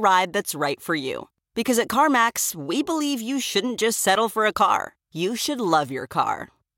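No technical faults are audible anywhere in it.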